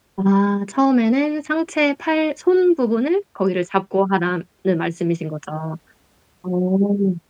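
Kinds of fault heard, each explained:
Listening to the speech recording, nothing stood out.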